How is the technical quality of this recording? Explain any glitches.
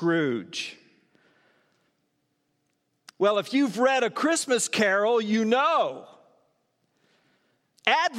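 No technical glitches can be heard anywhere in the recording.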